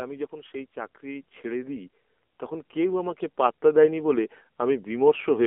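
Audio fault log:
throughout  AMR narrowband mobile codec: the sound is confined to roughly 250 Hz to 3.4 kHz, and the thin, buzzy, synthetic texture points to a low AMR-NB mode around 7.4 kbps. Unlike a plain band-limited phone line, pulse-driven vocal-tract modelling adds plainly audible artificial grain.
0.29–4.05 s  automatic gain rising: the level climbs steadily by about 11 dB as the gain control lifts what it judged too quiet. The voice and the background noise swell together over several seconds, which sets it apart from a speaker simply talking louder.
3.09–3.23 s  AMR bit errors: for about 0.14 s, a handful of 20 ms frames, the voice turns hoarse, scratchy and gargly while keeping roughly its pitch and level. Flipped low-priority bits, around 2 percent, misplace excitation pulses; unlike dropped frames, nothing goes silent or repeats.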